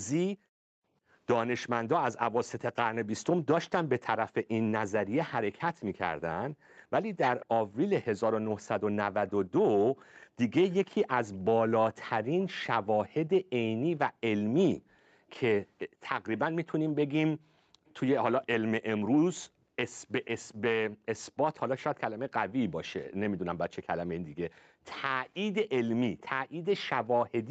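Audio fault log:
0.34 to 27.50 s, speech suppressed in double talk: The echo canceller was likely unable to tell the near talker apart from loudspeaker echo while both sides spoke, so it turned both down together. For nearly the whole clip the speech dips, thins and breaks into pieces, and at its deepest it falls by roughly 40 dB, close to silence. Over the 8 kHz band of the Opus call path, the speech keeps ducking unevenly instead of holding a steady level.
7.40 to 7.46 s, 9.29 to 12.46 s, 14.6 to 15.8 s, 17.86 to 17.91 s, 20.24 to 21.6 s and 25.34 to 26.21 s, echo leak: A loudspeaker on one side, likely not fully cancelled, sent part of the audio back into the call. A copy of the speech trails it by 485 ms. At 7.40 and 20.24 s it sits about 20 dB under the speech, at 9.29 and 14.6 s about 30 dB under, and at 17.86 and 25.34 s about 35 dB under. It comes through as delayed scraps and longer stretches.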